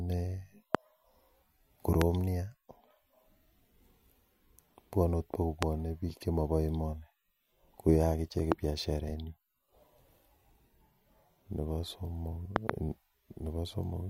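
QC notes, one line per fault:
0.75–0.77 s, 2.02–2.04 s, 5.63–5.65 s, 8.52–8.54 s: loud pop, one each time. A sudden voltage step, likely from a switch, plug contact or static discharge, gets added to the signal, and the following circuitry shapes it into a brief pulse. The result is a sharp pop about 25 dB above the speech, with the speech carrying on underneath.
12.56–12.72 s: loud pop, two in quick succession from a double pulse of the same kind, likely a second contact or discharge. They are heard as a doubled pop, again about 25 dB over the speech.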